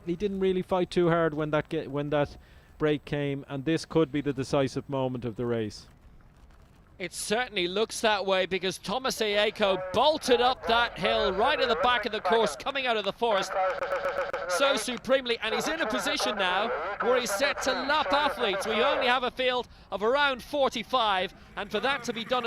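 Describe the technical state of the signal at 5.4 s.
At 5.4 s the signal is intact, with no dropout, distortion, glitch or other audible fault at that moment.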